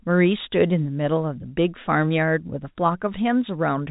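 No technical faults can be heard anywhere in the speech. The G.711 telephone coding is working as it should, with nothing above about 3.8 kHz and the format's faint level-following noise kept well below the speech.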